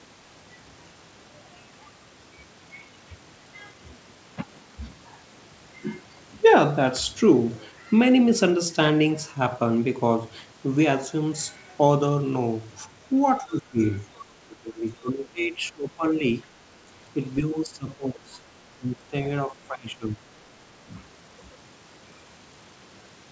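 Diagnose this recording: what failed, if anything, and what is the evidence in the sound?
Speech suppressed in double talk at 13.4–13.8, 14.48–16.22, 17.41–18.39, 18.79–19.14, 19.47–20.23 and 20.86–20.9 s, in the call processing stage. The waveform envelope sags by up to about 20 dB, and the spectrogram shows the harmonics thinning. The likely cause is the echo canceller ducking the talker during overlap.

Other side's voice leaking through at 14.16–14.22 s, also in the call processing stage. A faint second voice about 25 dB below the speech appears as weak, separate harmonic traces that the echo canceller likely left behind.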